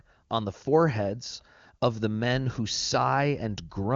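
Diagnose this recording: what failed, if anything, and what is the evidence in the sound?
Nothing has failed here: the speech comes through an AMR wideband (HD Voice) link that simply stops at about 7.3 kHz, as that path normally does, and at what sounds like its highest rate there's no roughness or rasp to point at.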